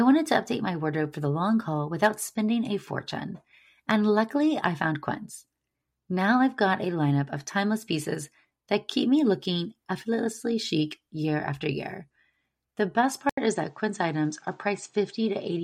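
Speech throughout, and at 13.29 s there's a gap of about 80 ms, after which the sound comes back duller, with nothing above 8.7 kHz right through to the end. A faint new background noise sits well under the speech, while loudness stays roughly where it was. That's most likely an input switched to a poorer device partway through the recording, with the replacement microphone passing a narrower band and bringing its own noise floor.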